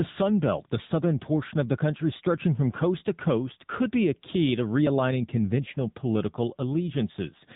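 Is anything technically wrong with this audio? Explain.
Yes. The speech has passed through an AMR narrowband mobile codec, and the damage is plainly audible from start to finish. Nothing above about 3.8 kHz survives, so the sound is dull and boxed in. The codec rebuilds each 20 ms frame from a vocal-tract model excited by a few pulses. At a low bit budget that model is coarse. The voice turns buzzy and synthetic, which fits a rate near 8 kbps.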